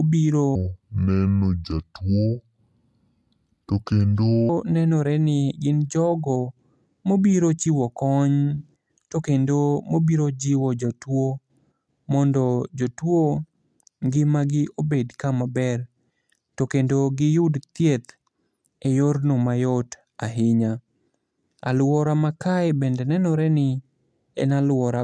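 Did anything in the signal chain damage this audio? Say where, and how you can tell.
Yes. A wrong sample rate runs from 0.55 to 4.49 s at the playback stage: the speech drops about 6.5 semitones and slows to 0.69 times its speed, low and dragging together. The samples were clocked out unconverted, which fits 32 kHz material played at 22 kHz.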